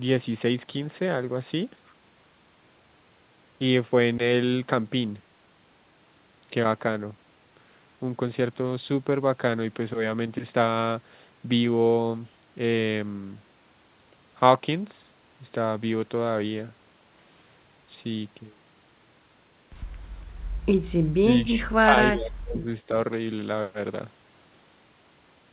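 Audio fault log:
21.10–21.27 s, 21.57–21.97 s, 22.13–22.67 s, speech suppressed in double talk: the speech dips sharply three times in quick succession, the first by about 20 dB and the later two by about 30 dB, for roughly a second in total. This is likely an echo canceller that could not tell the near talker from loudspeaker echo while both sides spoke, so it attenuated everything.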